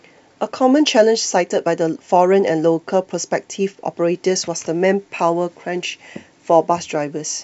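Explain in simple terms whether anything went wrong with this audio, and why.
Nothing went wrong here; no faults can be heard.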